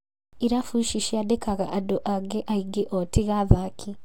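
A short speech recording with no audible technical faults anywhere in the signal.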